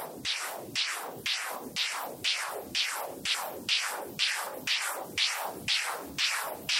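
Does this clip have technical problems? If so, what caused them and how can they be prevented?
Yes. There are sudden jumps in the sound at 2.07 s and 3.34 s, with no silence. The first skips a tiny piece. The second skips a longer stretch. Both are likely a dropped buffer (overrun). Prevent it with a larger buffer or higher recording-thread priority.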